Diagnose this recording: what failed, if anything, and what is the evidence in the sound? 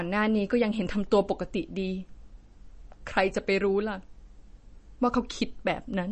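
The failure is at the codec stage and runs through the whole recording. The speech carries plainly audible MP3 compression damage, likely from a low-rate encode. Nothing survives above 8.3 kHz, so s sounds lose their upper hiss and turn watery. Weak spectral detail flickers in and out as the encoder drops it frame by frame, which fits a stream of around 32 kbps. A spectrogram would show a hard ceiling at 8.3 kHz with blotchy gaps beneath it.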